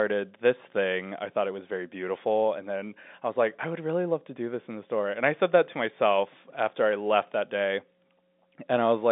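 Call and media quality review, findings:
No faults found: the speech sits in an ordinary G.711 telephone channel, consistent with 64 kbps mu-law, with the line band running from about 200 Hz to 3.7 kHz and nothing present above 4 kHz.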